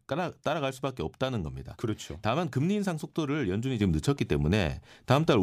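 A sudden gain jump at 3.81 s in this speech clip lifts the speech and the background noise together by about 6 dB until the end, likely from a level change applied without a ramp.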